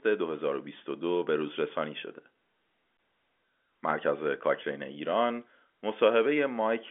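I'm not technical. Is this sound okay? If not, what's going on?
Yes, nothing here sounds wrong.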